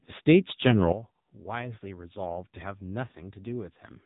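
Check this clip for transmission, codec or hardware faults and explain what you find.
Two faults are present: narrowband mobile coding across the whole recording, and a sudden drop in level partway through.

AMR narrowband mobile codec, throughout: The speech has passed through AMR-NB, which samples at 8 kHz and rebuilds the voice from a vocal-tract model excited by a few pulses per 5 ms subframe. Nothing survives above about 3.8 kHz, so consonants sound dull and boxy. The coding damage is heavy: the voice is buzzy and synthetic, which points to one of the lower modes, around 6.7 kbps.

Sudden gain jump, from 0.92 s to the end: At 0.92 s the level falls abruptly by about 12 dB, and the speech and background noise drop together between one sample and the next. The step has no fade. The likely cause is a gain setting or bit shift applied without a ramp, and the lower level holds unchanged to the end of the recording.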